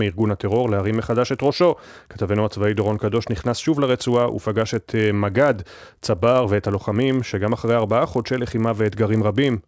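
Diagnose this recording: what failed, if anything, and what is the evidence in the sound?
Sample-rate conversion stage: the resampler restarted on every 20 ms block, so block edges carry errors, heard as a 50 Hz buzz under speech and seen as vertical spectrogram lines.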